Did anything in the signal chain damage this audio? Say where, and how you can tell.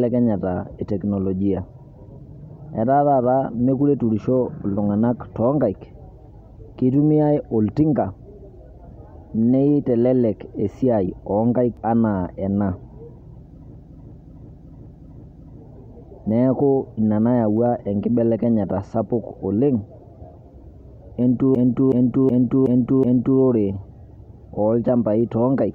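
Yes, a system hang loop in the driver buffer at 13.75–15.60 s and 21.55–23.41 s: one 372 ms slice stutters five times, fitting a stuck 16384-sample ring.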